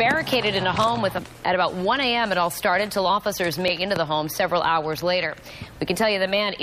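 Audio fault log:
1.17–1.19 s and 3.68 s: damaged data in a compressed stream. Two brief disruptions where corrupted frames are misread and the decoder loses sync, hunting for the next valid frame header. A spectrogram shows thin vertical breaks; the waveform shows short disturbances.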